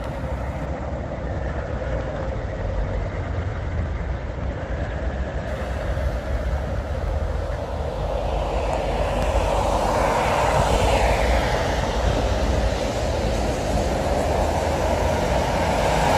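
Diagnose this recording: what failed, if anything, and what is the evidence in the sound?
From 0.67 to 5.53 s the sound goes coarse and muffled above 8 kHz: a network-driven call bitrate drop, with Opus squeezed from 96 to 14 kbps.

A single loud pop, roughly 15 dB over the sound, hits from 9.23 to 9.26 s, likely a voltage spike in the analogue wiring.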